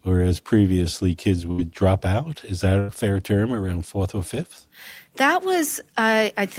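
Bursts of packet loss at 1.51–1.63 s (after "whereas previously kids") and 2.79–2.90 s (before "fair term around fourth"): lost audio is concealed by the last sound held and faded out, seen as smeared, decaying energy on a spectrogram.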